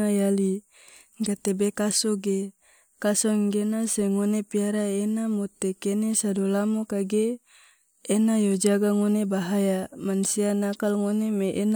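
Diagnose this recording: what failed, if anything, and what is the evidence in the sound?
Nothing in the recording points to a failure at any stage of the chain. No event in the sound serves as evidence of a fault, so there is no mechanism to explain.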